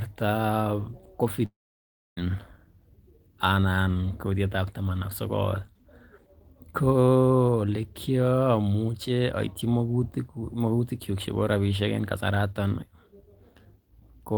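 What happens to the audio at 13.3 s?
Nothing goes wrong at 13.3 s; the speech continues intact through that moment, with no dropout, click or other audible fault.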